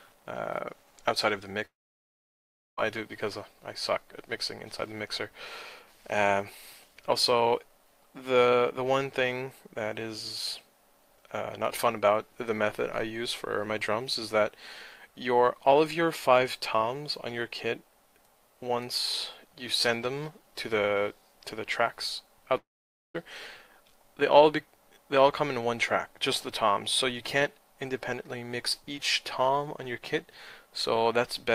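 At 1.65 s the sound breaks off into a short fading buzz, then goes silent for about a second before picking up again at 2.79 s. The same thing happens from 22.57 to 23.16 s, with roughly half a second of silence. Both fit a long network dropout as the likely cause: packets stopped arriving, the receiver briefly stretched the last bit of sound and then gave up, and the missing stretch is simply gone when playback resumes.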